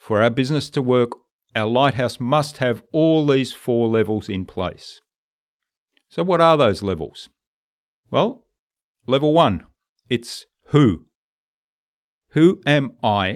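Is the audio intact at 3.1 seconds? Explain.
Yes, the speech at 3.1 seconds plays through cleanly, with no dropout, click, distortion or other break at that moment.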